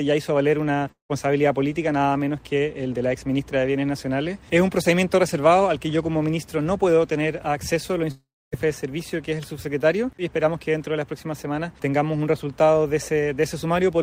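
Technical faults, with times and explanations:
0.91–1.12 s and 8.11–8.55 s, long network dropout: the sound breaks off and is replaced by a buzzy, fading continuation that sinks into near-silence (about 120 ms the first time, 270 ms the second), then resumes with roughly 0.18 s and 0.42 s missing. The likely cause is lost packets concealed by extending the last sound. On a spectrogram, smeared repeating bands fade into a dark gap. The waveform shows a decaying envelope, then a flat line.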